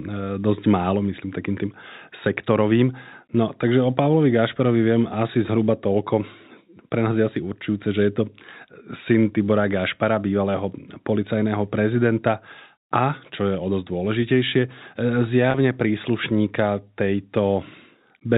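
At 15.51 to 15.54 s, about 30 ms of speech drops out and is covered by packet loss with pitch repetition: the receiver loops the last pitch period across the gap, giving a brief held, buzzy tone before normal G.711 telephone-band speech resumes. The gap length fits roughly three lost 10 ms packets.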